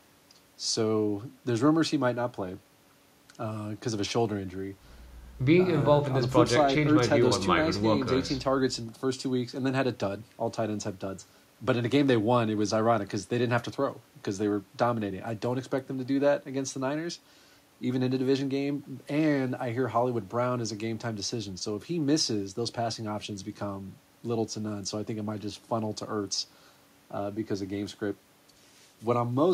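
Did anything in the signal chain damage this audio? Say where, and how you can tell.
No, nothing in the signal chain damaged this audio.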